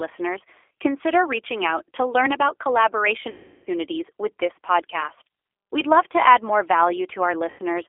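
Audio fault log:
throughout: G.729 codec. The speech sounds rough, slightly synthetic and boxed-in, with nothing below about 300 Hz or above about 3.5 kHz. At around 8 kbit/s the codec rebuilds each 10 ms frame from a vocal tract filter, a pitch predictor and a handful of pulses rather than the real waveform. That sparse, modelled excitation causes the grainy artificial texture, and the narrow telephone band removes body and brightness.
3.30–3.68 s and 7.50–7.60 s: VoIP packet loss concealed by the speech codec. In each gap the sound is stretched out and fades, about 360 ms long the first time and about 90 ms the second. The decoder lost a run of packets and kept extrapolating from its last pitch and filter while turning the gain down frame by frame. Because each frame builds on the previous one, the speech stays weak or distorted briefly after audio resumes.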